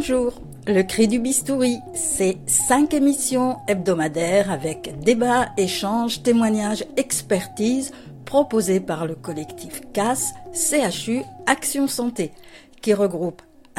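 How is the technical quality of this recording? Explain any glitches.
No technical faults are audible anywhere in the recording.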